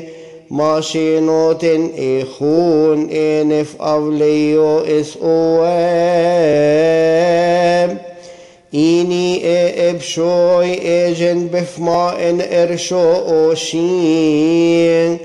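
A dropped buffer (overrun) shows up twice, at 6.53 s and again at 11.94 s. Each is a short jump where the sound skips forward with no gap of silence. The likely cause is that the recording software fell behind and the hardware wrote over samples it had not yet collected, so roughly 5 ms of audio vanished and the material on either side was butted together, leaving that abrupt join.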